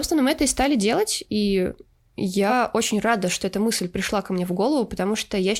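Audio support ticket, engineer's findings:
Compressed frames skipped at 2.49–2.53 s. Sound jumps ahead about a tenth of a second, roughly two 46.4 ms frames. Probable component: decoder or file. Frames missing or rejected as damaged.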